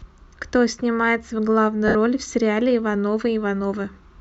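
A speech recording with a dropout from about 1.88 s to 1.95 s, where lost LE Audio frames leave a 70 ms gap that fits seven 10 ms LC3 frames. During the gap the LC3 decoder conceals the loss by repeating the last good spectrum with randomised signs, so the sound turns into a brief noisy smear. The concealment starts fading after the first few frames of the gap before normal decoding resumes. The light lossy compression is audible only as ordinary coding.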